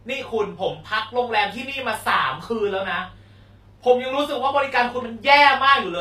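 Throughout, the treble is likely rebuilt from copied lower bands by HE-AAC compression, fitting a bitrate near 24 kbps, so s sounds turn gritty and metallic.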